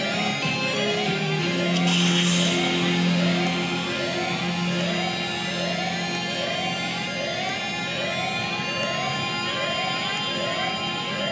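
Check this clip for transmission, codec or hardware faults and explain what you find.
Nothing stood out on listening to this clip.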